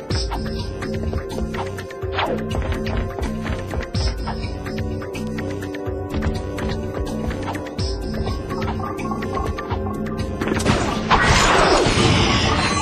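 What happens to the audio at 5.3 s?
Nearby electrical switching, likely a switch, motor or static discharge arcing close to the cable, couples a brief burst of energy into the audio line at 5.27 s. The result is an electrical switching spike: a sharp snap lasting only a millisecond or so, laid on top of the sound rather than replacing it. It peaks at roughly -25 dBFS.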